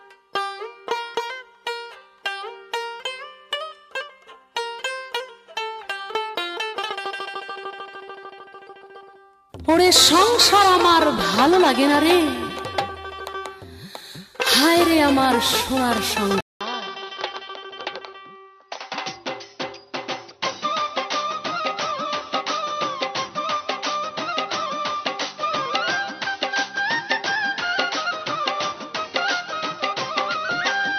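Input switched to a poorer device at 16.41 s, running to the end. After a 200 ms gap, the sound turns duller and boxier, with nothing above 6.1 kHz, a drop of about 5 dB, and faint new background noise. The likely cause is a change to a narrower-band microphone.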